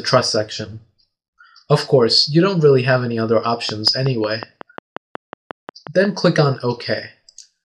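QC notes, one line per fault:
3.69–6.06 s, train of clicks: a steady ticking of sharp, near-identical pops rides over the audio for a little over two seconds, arriving evenly at about 5.5 per second, roughly fifteen in all, with peaks standing out around 5 dB above the surrounding signal. The uniform shape and metronomic spacing point to a repeating external pulse, likely interference from nearby equipment or a faulty connection or power supply injecting a spike at a fixed interval.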